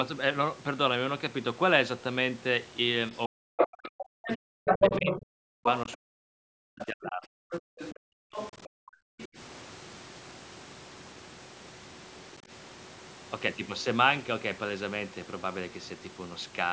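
It's a speech recording on a call path, with content topping out around 8 kHz, and the main trouble is speech suppressed in double talk from 3.27 to 9.37 s. The talker keeps getting ducked, for roughly five seconds in total, with the deepest dips around 40 dB. That's most likely the echo canceller failing to separate the talker from loudspeaker echo while both sides spoke, and pulling everything down. There's a much milder repeat at 12.40–12.49 s, only a few dB. Overlapping that first stretch, the other side's voice is leaking through in scraps at 3.57–3.68, 4.28–5.21, 5.63–5.95, 7.51–7.95, 8.33–8.69 and 9.20–9.27 s. The first two bursts are actually a touch louder than the talker, about 5 dB above. After that the leak fades, sitting a little under the talker and finishing well below, about 20 dB down by the last scrap. It's likely the residue of the far end playing on the talker's loudspeaker that the canceller didn't fully strip from the mic.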